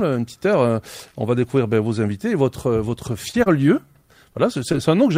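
Between 3.31 and 4.75 s the audio picks up a few brief ticks and smeared hiccups, around four of them, none longer than about 20 ms. These are scattered short gaps: isolated packets went missing, about 80 ms in total, and the receiver filled each hole by extending the preceding sound.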